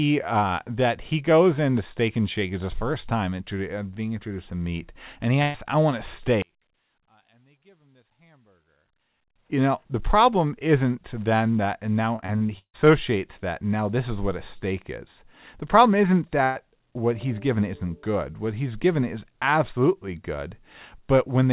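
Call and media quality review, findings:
Burst of packet loss at 5.42–5.56 s: about 120 ms lost, gap filled by concealment that stretches the last sound into a fading buzz or hiss. Spectrogram shows smeared, repeated harmonics decaying, then an abrupt jump in content. Jitter buffer/PLC.

Burst of packet loss at 16.44–16.57 s: same signature, about 120 ms missing. Waveform shows a smooth decaying envelope where transients should be, then a discontinuity on resume.

One channel inverted, 6.42–9.36 s: level drops about 38 dB, leaving a faint residue. Likely one stereo channel with reversed polarity cancelling on a mono downmix. Waveform nearly flat; spectrogram almost empty across the band.

Repeated packet loss (robotic sound), 12.16–12.76 s: choppy sound from six gaps, longest 151 ms, with concealment covering about 46% of the span. Spectrogram shows repeated smeared frames alternating with real content. 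Waveform shows repeated patched segments. Network loss and jitter buffer.

The call path band-limits everything above 4 kHz, consistent with G.711 A-law. The spectrogram shows a hard ceiling there.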